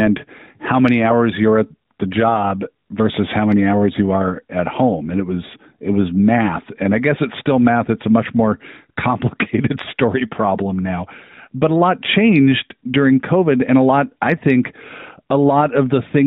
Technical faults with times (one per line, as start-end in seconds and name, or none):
none